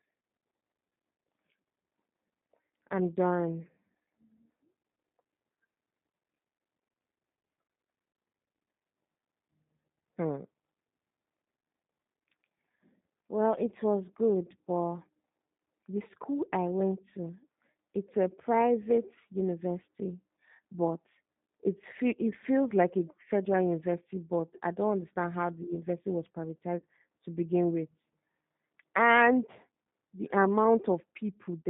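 G.729 codec, throughout: the whole recording passes through this low-rate speech codec, and the sound suggests the 8 kbit/s G.729A variant. The band runs from 150 Hz to 3.7 kHz, so the speech lacks both low body and upper brightness. Each 10 ms frame is rebuilt from a vocal tract filter, a pitch predictor and a few pulses rather than the actual waveform. That leaves the speech plainly rough and slightly synthetic.

VoIP packet loss concealed by the speech codec, at 13.66 to 13.69 s and 26.79 to 26.83 s: each time, packets went missing and the decoder filled the gap by extending its last pitch and filter settings with falling gain. The first dropout, just before "was good but", is brief and fits a single lost 10 ms frame. The second falls between "how the university was" and "to begin with" and suggests three lost frames totalling about 30 ms. It sounds as a longer stretch that fades, and the speech stays weakened as the decoder recovers.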